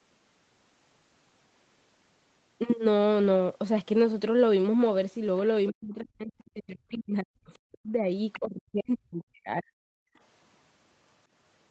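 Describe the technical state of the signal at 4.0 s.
At 4.0 s the speech is intact, with no fault: it has passed through ordinary call microphone processing and a WebRTC call path, with nothing above about 8 kHz, consistent with Opus running at a bandwidth of 8 kHz.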